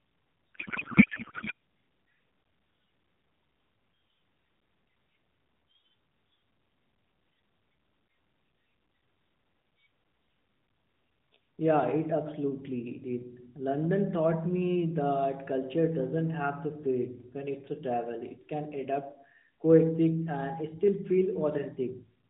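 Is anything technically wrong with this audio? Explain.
Yes. From 0.55 to 1.52 s there is a codec payload misread. The decoder unpacks AMR narrowband frames with their fields misplaced, which fits octet-aligned packing read as bandwidth-efficient, so the speech becomes garbled warbling noise.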